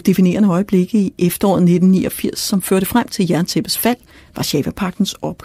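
No technical faults can be heard anywhere in the speech. There are no events to place in time.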